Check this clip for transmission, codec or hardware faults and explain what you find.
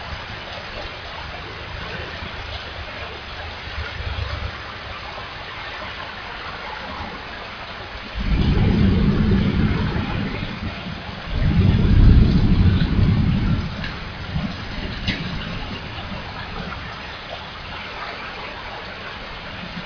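Nothing in the audio points to a technical fault; the signal holds steady and continuous throughout, with no audible disturbance from the path it travelled.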